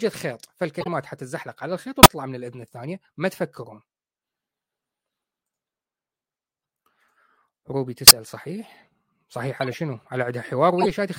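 Speech with corrupt frame decoded faults: chirps and noise bursts at 0.81–0.88, 2.03–2.07, 8.07–8.11, 9.61–9.74 and 10.79–10.87 s. Damaged compressed frames were played anyway, putting energy at wrong frequencies. Spectrograms show misplaced bright blocks. The 2.03 and 8.07 s errors are the strongest, peaking around 0 dBFS before the level was reset.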